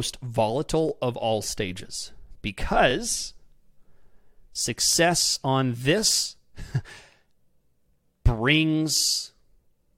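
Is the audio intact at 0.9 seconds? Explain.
No. Overlapping chunks disrupt the audio from 0.89 to 0.91 s, just before "of all stages." The speech was handled in 2-second chunks, and this chunk began before the previous one had finished. The last 20 ms of the preceding chunk therefore play twice at the join. That short duplicated slice breaks the flow of the speech and is heard as a brief click or stutter right where the next phrase begins.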